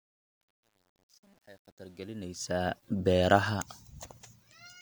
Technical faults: truncation distortion on a fade

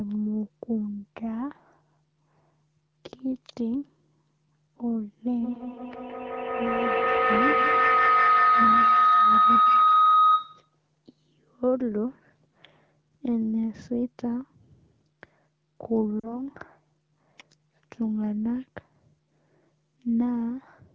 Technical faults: feedback howl; lost AMR speech frames

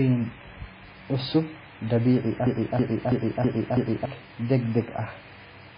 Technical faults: MP3 compression; broken-record loop

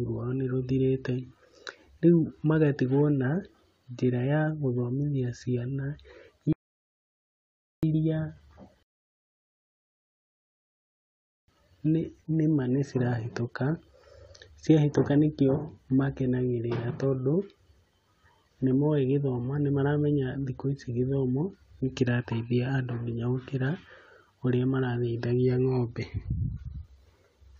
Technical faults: rebuffering stall

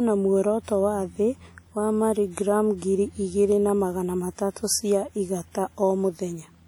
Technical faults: WMA compression

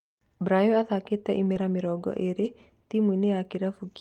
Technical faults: short concealed packet loss

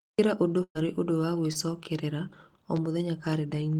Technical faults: burst of packet loss; short concealed packet loss; loud pop

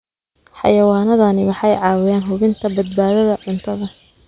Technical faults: none

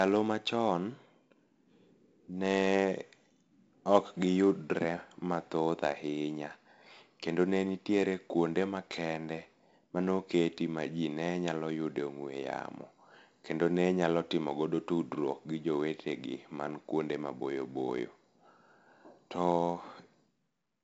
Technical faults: 4-bit ADPCM compression

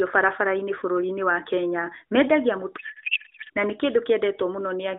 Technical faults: codec payload misread

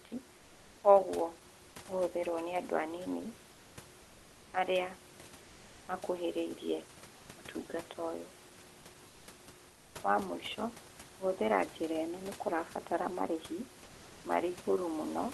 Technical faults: comfort noise in place of the background

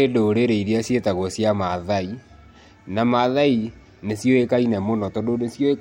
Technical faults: none

